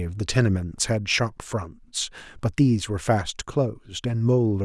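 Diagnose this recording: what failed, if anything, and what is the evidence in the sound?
Nothing failed at any stage: the speech runs without a break, level jump, dropout or added noise anywhere in the recording.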